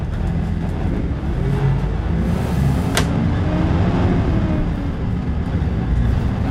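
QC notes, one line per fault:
throughout: periodic clock jitter. Interference is wobbling the converter's sampling clock at around 2 kHz, so every component of the sound picks up sidebands roughly 2 kHz above and below it, strongest on high frequencies, adding a rough, metallic edge that vanishes in silence.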